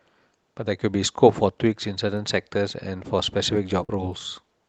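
Speech carried over a call link shows a burst of packet loss at 3.83 to 3.91 s. The receiver stretched the last sound for about 53 ms, fading it into a held buzz or hiss, then resumed with roughly 60 ms of audio skipped. On a spectrogram, the harmonics flatten into smeared horizontal streaks that dim before cutting to mismatched content. The waveform shows a decaying repeated pattern, then an abrupt jump. The spectrum tops out near 12 kHz, consistent with an Opus call codec.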